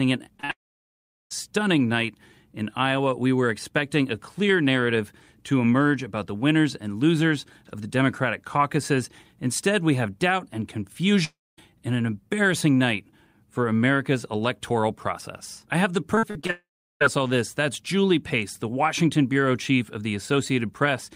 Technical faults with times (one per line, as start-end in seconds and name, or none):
0.37-0.51 short concealed packet loss
0.51-1.32 long network dropout
11.24-11.71 long network dropout
16.15-16.51 repeated packet loss (robotic sound)
16.51-17.02 long network dropout